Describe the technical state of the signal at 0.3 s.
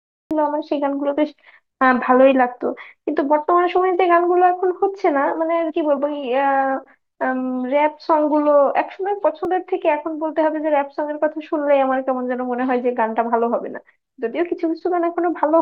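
At 0.31 s the speech has a cut-off start: the recording began late, so digital silence from 0 to 0.31 s gives way abruptly to sound already in progress, with no natural attack. The waveform jumps from a flat line, and the spectrogram shows a hard vertical edge.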